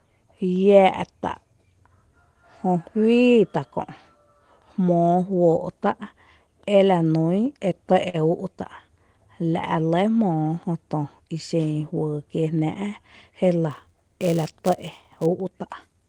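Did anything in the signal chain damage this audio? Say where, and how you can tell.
Yes. A short stall from a late packet sits at 8.09 to 8.16 s, in the network and jitter buffer stage. A packet arrived late, the buffer ran dry, and the receiver held the last sound for 44 ms rather than dropping anything. Nothing is lost, but that sound drags on with a faint buzzy dip, and everything after it plays 44 ms later than before.

A jitter buffer speed-up runs from 12.16 to 12.61 s, also at the buffer. Having collected more audio than it wanted, the receiver trimmed small pitch-period slices in quick succession, removing roughly 50 ms in total. The speech plays at about 110% speed with its pitch unchanged, so that stretch sounds rushed.

A filter restarted on every block appears from 13.71 to 15.26 s, in call processing. The filter loses its state at each block boundary and begins again from zero, so every block opens with a small transient. 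Those transients recur at 200 Hz, which gives a buzz that gets louder and quieter with the speech. That rate fits 5 ms processing blocks.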